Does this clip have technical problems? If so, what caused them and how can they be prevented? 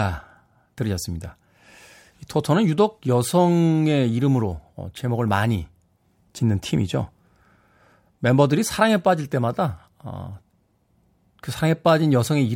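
No, no technical faults here.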